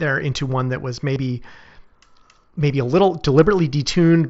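Concealed Bluetooth headset packet loss hits from 1.14 to 1.16 s, just after "into one that was". About 22.5 ms went missing, fitting three lost headset frames. The receiver looped a matching recent stretch of waveform, giving a brief buzzy held tone, then a slight warble as mSBC wideband speech returns.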